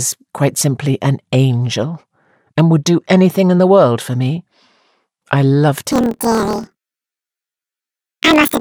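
From 5.92 s, after "I loved", planar audio read as interleaved: each 26 ms block plays twice at double speed, an octave up with a 38 Hz buzz, yet unlike a rate error the pace holds.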